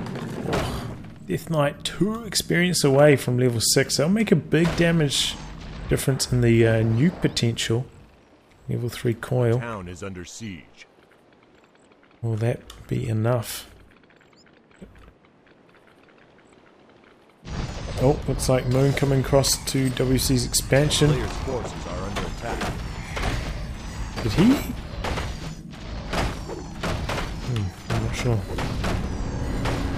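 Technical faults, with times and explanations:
No technical faults can be heard in this clip.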